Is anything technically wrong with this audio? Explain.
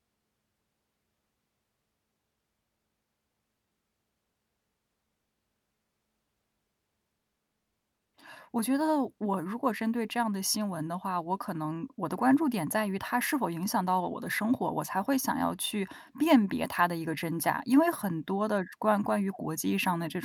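No, no technical faults here.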